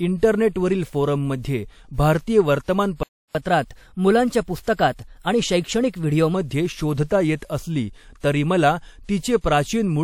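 Speech, with a playback stall at 3.03 s: the audio cuts out mid-flow and stays silent for about 0.32 s, until 3.35 s, before resuming. The likely cause is the player running short of buffered data or its output thread being blocked, so nothing was delivered until it recovered. From 3.35 to 6.35 s comes catch-up at higher speed. The player works through its backlog by resampling at 1.1 times normal rate, so the speech runs faster and sits roughly one and a half semitones higher for those three seconds.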